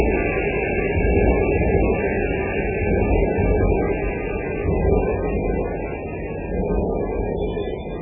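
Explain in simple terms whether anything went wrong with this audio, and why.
Throughout the whole recording the sound is dull and muffled, with a watery, swirly texture and sharp hits smeared out; nothing is heard above about 3.5 kHz. This is likely heavy MP3 compression, which cut the treble and dropped faint detail to save space.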